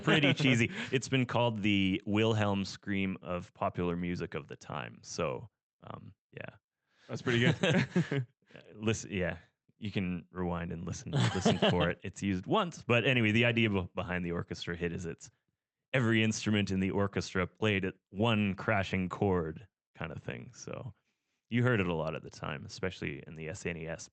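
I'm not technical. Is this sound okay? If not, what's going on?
No. At about 19.83 to 19.89 seconds the speech briefly smears or wobbles. This is short concealed packet loss: around 40 milliseconds of the call arrived too late, so the receiver filled the gap by stretching the preceding sound before rejoining the real audio.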